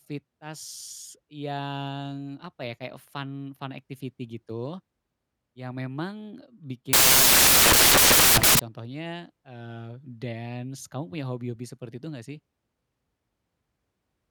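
From 6.93 to 8.59 s, after "yang memang bikin", samples built from the wrong bytes turn speech into loud broadband noise: dense waveform, flat spectrogram, until "contohnya eee dance kamu".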